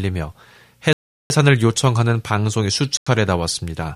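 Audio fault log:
0.93–1.30 s and 2.97–3.07 s, block of digital silence: the output buffer was likely left unfilled and zeroed, in runs of 0.37 s and 93 ms that fit 16384- and 4096-sample blocks. The speech drops abruptly to dead silence and back without a fade.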